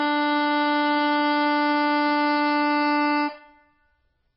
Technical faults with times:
0.00-4.36 MP3 compression

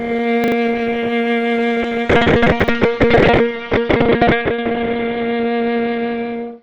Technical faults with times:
0.44-0.52 chunks out of order
1.82-1.85 short concealed packet loss
2.04-6.62 call bitrate drop
2.60-2.68 chunks out of order

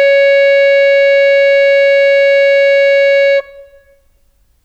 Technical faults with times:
none

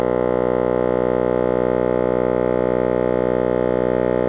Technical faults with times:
none

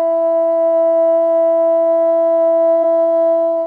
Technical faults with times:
2.79 damaged data in a compressed stream

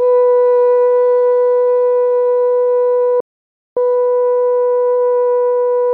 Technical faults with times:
3.20-3.77 audio dropout to silence

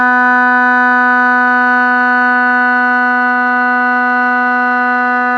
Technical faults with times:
none

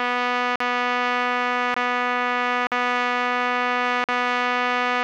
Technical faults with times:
0.56-0.60 block of digital silence
1.74-1.76 block of digital silence
2.67-2.72 block of digital silence
4.04-4.09 block of digital silence

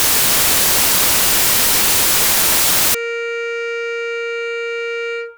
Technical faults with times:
0.00-2.94 samples built from the wrong bytes

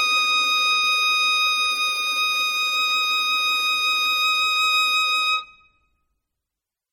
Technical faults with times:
0.00-6.92 MP3 compression

